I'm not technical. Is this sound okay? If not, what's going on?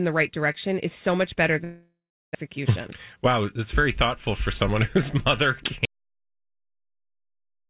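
No, there are three problems in this speech recording.

Long network dropout, from 1.64 to 2.37 s, right after "is so much better": the sound smears into a fading buzz, then goes quiet for about a third of a second. When it resumes, roughly 0.6 s of speech is missing. The likely cause is audio that never arrived over the network. Unlike the later silence, this one starts with that fading buzz rather than a clean cut.

Jitter buffer speed-up, from 3.16 to 3.97 s: the system caught up on delay by snipping out tiny slivers of sound, about 40 ms in total. The speech runs about 4% faster, but the pitch stays the same. A sped-up tape would sound higher.

Audio dropout to silence, from 5.85 s to the end: the sound stops abruptly and stays completely dead, with no background hiss at all. A disconnected or muted input is the likely cause. It has no fading buzz first, and nothing comes back afterwards.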